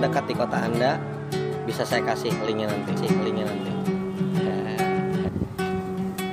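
The audio has a doubled audio track from 2.97 s to 5.29 s. A second full-band copy trails the original by roughly 0.7 s, about 5 dB quieter. It has no reverb tail and cuts in and out abruptly. The likely cause is a second capture path or a misaligned edit.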